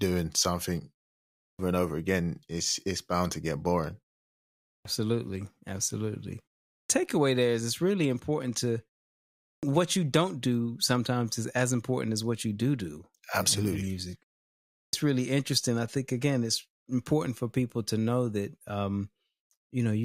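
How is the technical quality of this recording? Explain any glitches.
The main problem is a clipped start after a pause, and it shows up five times: at 1.39, 4.67, 6.71, 9.43 and 14.72 s. Each follows a short gap of roughly 0.3 to 0.7 s, and each time about 0.18 to 0.21 s of speech goes missing, so the talker seems to jump in mid-sound out of dead silence. What's happening is that the output device dozes off during the gap and needs a moment to wake up and lock again, swallowing the opening of the next phrase.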